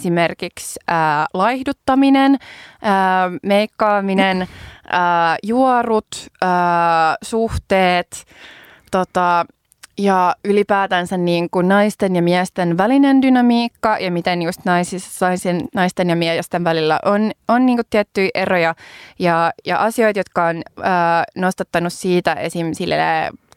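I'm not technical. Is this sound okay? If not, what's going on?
No. From 0.13 s to 23.56 s there is a faint, steady rattle of tiny ticks, roughly 25 per second, under the speech. These are clock slip clicks, likely from two devices whose clocks disagree slightly, so a single sample gets dropped or repeated.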